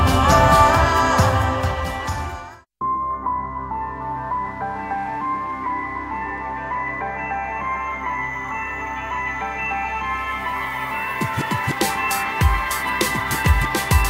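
At 11.81 s a doubled audio track begins and runs to the end: a second full-band copy of the sound appears, trailing the original by about two seconds and sitting roughly 5 dB lower, with no decay or room colouring. It switches on abruptly. The likely cause is the signal being captured again through a slower path. On a waveform, material from two seconds earlier reappears under the current sound. A spectrogram shows a fainter, time-shifted duplicate of earlier patterns overlaid from 11.81 s onward.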